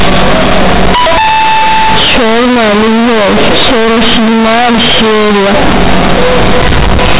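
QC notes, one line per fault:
Throughout: companded audio read as linear. Mu-law bytes play as raw 8-bit samples without expansion, so quiet parts swing over about half the range, as large as loud ones. The result is loud, buzzy distortion and noisy pauses.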